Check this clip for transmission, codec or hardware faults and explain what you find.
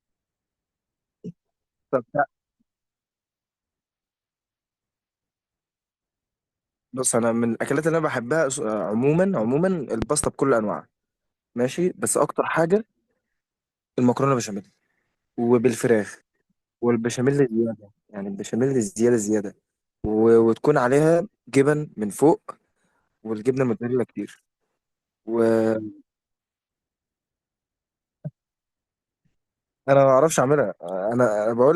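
Two loud pops stand out in the speech. The first, from 10.02 to 10.26 s, is a double pop, two sharp hits close together that jump about 10 dB above the speech. The second, from 20.05 to 20.07 s, is a single, softer pop a few dB above the level. Each is likely a voltage spike from a plug, switch, static or driver glitch, shaped by the downstream circuitry into a thump while the speech carries on underneath.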